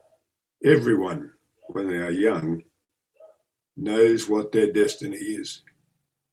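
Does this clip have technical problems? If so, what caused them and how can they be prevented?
Yes. Between 1.59 and 2.43 s, packets repeatedly arrived later than they were due, so the jitter buffer ran dry five times. Each time the receiver stretched the last sound to bridge the gap, about 75 ms in total, none longer than 25 ms, so the speech stutters and drags while nothing is lost. A deeper, adaptive jitter buffer that absorbs this arrival variation would prevent the repeated stalls (stutter).

From 2.84 to 2.90 s, a single packet turned up about 55 ms behind schedule and left the buffer empty. The receiver held the preceding sound for 55 ms, then resumed from the same point, so one sound lingers too long with a faint buzz or dip. Buffer headroom large enough to cover a 55 ms delay jump, or a network path with steadier latency, would prevent this short stall from a late packet.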